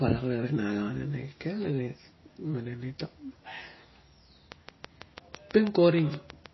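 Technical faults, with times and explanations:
Throughout: MP3 compression. The speech has plainly audible codec damage, with nothing above 5.8 kHz, so the top of the spectrum is simply missing and sibilants lose their edge. A watery, swirling texture runs under the voice where weak frequency components drop in and out between frames, and consonant onsets are smeared. The cut-off and the density of the artefacts fit a low bitrate, around 24 kbps, and this is most likely MP3 encoding starved of bits.
4.52–6.47 s: train of clicks. A regular ticking sits over the speech almost to the end of the clip, at about 6.2 clicks per second and roughly fifteen in all. Each click has much the same shape and peaks at about 15 dB above the signal, so they stand out sharply and are heard through the speech and in the gaps in it too. The even spacing and uniform pulses point to a repeating disturbance, likely electrical interference or a faulty connection or power supply.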